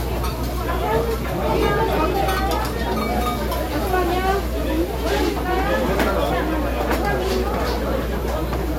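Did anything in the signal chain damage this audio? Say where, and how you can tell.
Yes, in the analogue wiring. Mains hum runs through the whole clip as a steady 60 Hz tone sitting only a few decibels below the everyday sounds, so it never drops out between events. A ground loop or a nearby transformer has coupled the power line into the signal before it was digitised. Unlike broadband low rumble from handling or wind, the hum holds one fixed pitch at the North American mains frequency and never varies in level.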